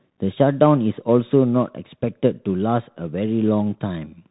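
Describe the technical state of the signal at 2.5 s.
At 2.5 s the speech carries the Bluetooth CVSD headset codec damage that runs through the whole clip. One-bit adaptive-step coding, which fits a 64 kbps CVSD link, leaves s sounds scratchy over a grainy hiss. A spectrogram shows a flat ceiling near 3.8 kHz and a speckled noise floor.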